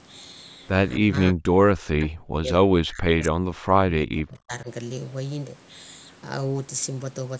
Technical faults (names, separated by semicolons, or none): speech suppressed in double talk